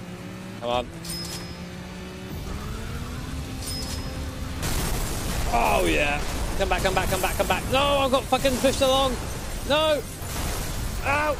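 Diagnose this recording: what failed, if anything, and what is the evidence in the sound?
Nothing failed; no faults heard.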